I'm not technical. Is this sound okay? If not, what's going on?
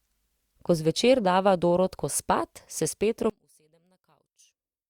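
No. From about 3.30 s to the end at 4.90 s, the speech drops away almost completely, leaving only a faint trace. The likely cause is one channel inverted: one side of the stereo signal has its waveform flipped upside down. When the left and right sides are combined into one, as a phone speaker or mono playback does, the two sides cancel each other, and the sound that was shared between them disappears.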